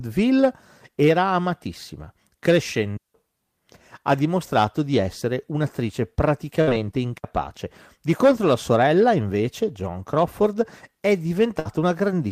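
At 2.97 to 3.14 s the speech falls into a digital wireless dropout: the receiver lost too much of the link and muted for about 173 ms, fading out and back in so fast that no click or noise burst frames the gap. On a waveform it is a flat, clean strip; on a spectrogram, a blank vertical band across every frequency.

Right after "dimostrato di essere un'attrice", at 6.61 to 6.70 s, comes a burst of packet loss. Rather than going silent, the decoder stretches the last received sound for about 56 ms, letting it sag in level, and then resumes roughly 60 ms further into the speech. That stretch is heard as a brief held, fading tone followed by a small jump. A spectrogram shows smeared horizontal streaks where the detail should be, and the waveform shows a repeating, shrinking pattern.

A second, shorter wireless dropout mutes 7.18 to 7.24 s for 60 ms, leaving another clean, empty slot.

At 11.59 to 11.68 s the same packet-loss pattern returns, with about 59 ms of decaying, repeated sound covering a 60 ms skip.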